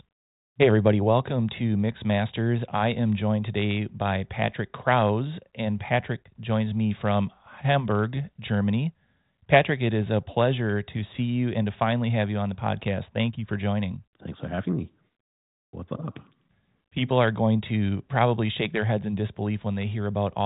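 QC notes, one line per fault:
Nothing stood out on listening to this speech, which comes through the G.726 ADPCM telephone path with its top end stopping near 3.9 kHz as that path does.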